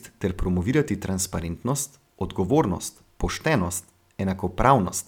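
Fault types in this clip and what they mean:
No faults can be heard.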